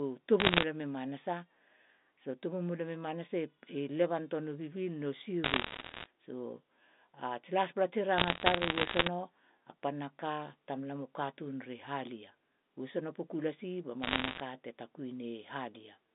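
Bit errors on a digital phone line crackle through the speech at 0.40–0.64 s, 5.44–6.06 s, 8.18–9.08 s and 14.02–14.40 s. Flipped bits, around 1 to 1.5 percent, corrupt single samples, giving sharp ticks: isolated waveform spikes and thin vertical streaks reaching the 3.7 kHz band edge.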